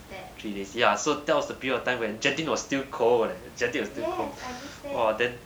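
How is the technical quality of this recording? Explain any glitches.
No glitches are audible in this speech recording.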